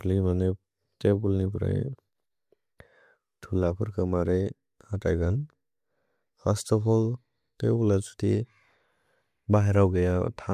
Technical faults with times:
none

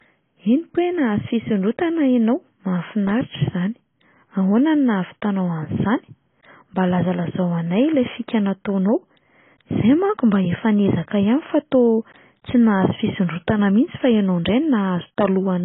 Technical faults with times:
0.00-15.64 AAC compression

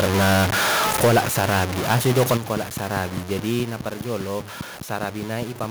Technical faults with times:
0.00-5.71 low bit depth without dither
0.00-0.47 microphone overload
1.03-1.64 microphone overload
1.05 microphone volume stepped down
1.90-2.37 microphone overload
2.37 microphone volume stepped down
2.57-5.64 train of clicks
3.63 microphone volume stepped down

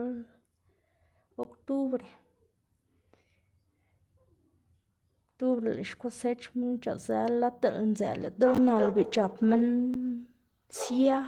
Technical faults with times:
1.43 block of digital silence
7.98-11.28 call bitrate drop
9.94 block of digital silence

